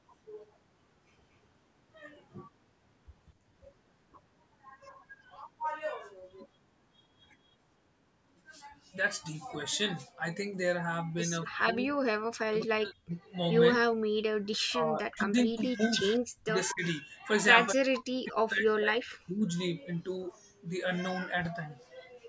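From 11.45 to 12.0 s the speech dips by about 20 dB. It then drops out harder, by about 40 dB, from 12.44 to 13.13 s, across 13.77 to 16.85 s, and again from 17.72 to 19.44 s. This is speech suppressed in double talk, likely caused by an echo canceller attenuating the near talker while the far side was also speaking. On the waveform these stretches appear as sudden sunken or nearly empty gaps. On the spectrogram, energy across the whole band, which stops at 8 kHz from the call's microphone processing, fades in broken patches.

Within the third suppressed stretch, at 16.69 to 16.74 s, there is a brief echo leak. It is a faint copy of the voice about 235 ms late and roughly 20 dB below the direct speech, likely residual loudspeaker pickup that the canceller failed to remove. It sounds like a brief ghostly flick. On the spectrogram it shows as a weak smear of the earlier speech pattern, with a small matching bump on the waveform.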